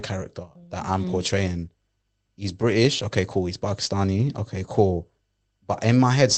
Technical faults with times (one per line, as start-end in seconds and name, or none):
none